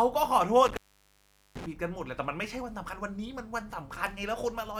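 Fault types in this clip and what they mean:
Intermittent contact: a loose cable or plug connection briefly opens, breaking the signal path. In this speech clip the disturbance runs from about 0.66 s to 1.66 s. The line is open for roughly 0.78 s of that window, and the speech drops out, leaving only faint hiss while the circuit is broken. Crackle marks the edges where the contact scrapes open and then reseats, so the gap is framed by rough clicks rather than a clean cut.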